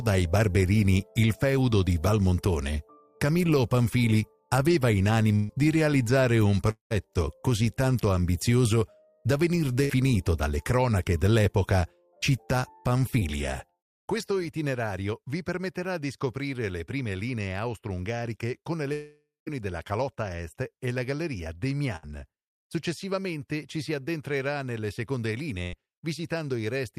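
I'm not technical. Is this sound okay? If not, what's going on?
No. At 5.35 to 5.51, 9.84 to 9.91, 21.96 to 22.05 and 25.63 to 25.75 seconds, the sound briefly smears into a fading buzz or hiss, then jumps ahead. That is a burst of packet loss: chunks of the call arrived too late, and the player stretched the last sound over the gap.

From 6.71 to 6.92 and 18.93 to 19.48 seconds, the sound trails off into a fade and then silence before returning with a piece missing. The likely cause is a long network dropout.

At 13.19 to 13.23 seconds there is a tiny smear. That is short concealed packet loss, a few hundredths of a second patched over by the player.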